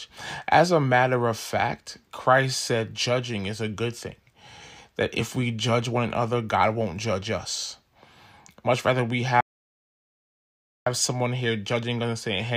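At 9.41 s, just after "rather we", the speech cuts out to an audio dropout to silence lasting until 10.86 s, about 1.46 s. The gap is silent, with no room tone or noise floor, so it sounds like a hard switch-off rather than a pause. The input was likely lost upstream, through a disconnected device, a failed link or a mute, while recording continued writing silence. Speech resumes abruptly at "someone here", and whatever was said in between is gone.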